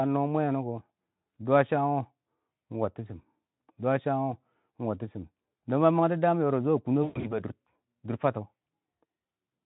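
Speech with VoIP packet loss concealed by the speech codec at 7.03 to 7.40 s: losses totalling 160 ms, longest run 120 ms, become a buzzy tone or coloured noise that fades rather than a silent dropout.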